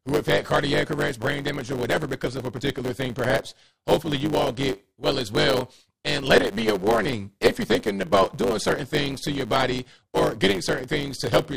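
From start to finish, one stage in the chain writes longer blocks than the next stage reads, so the tail of every block is discarded. This is a block size mismatch (truncated). The repeated cut at each block boundary produces a steady buzz at 100 Hz, the block rate. Because a slice of every block is lost, the audio runs about 1.09 times faster than normal, yet its pitch stays roughly where it should be.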